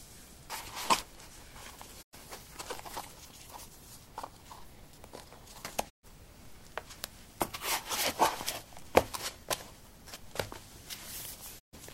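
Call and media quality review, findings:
Digital broadcast dropout, three hits: 2.01–2.15 s, 5.88–6.05 s, 11.58–11.75 s. Sound dips out over about 20 ms and returns after gaps of roughly 96 ms, then 128 ms twice, which fits three to four lost frames. Receiver or decoder side: frames failed checksum or signal dropped, so it muted until clean frames arrived. Audio under those holes is gone, not recoverable.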